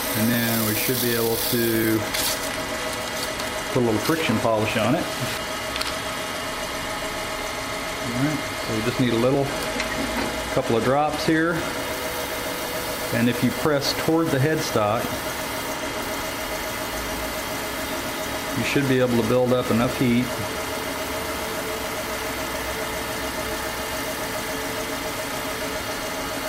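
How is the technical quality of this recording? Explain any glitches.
The recording has one recurring problem, clock drift buffer slips. From 0.34 s to 25.85 s a click lands every 1.5 s, about twenty in all. This likely comes from two clocks disagreeing by roughly 700 ppm, so a few dozen samples are dropped or repeated at each slip. A spectrogram shows evenly spaced thin vertical broadband lines, and the waveform shows step discontinuities.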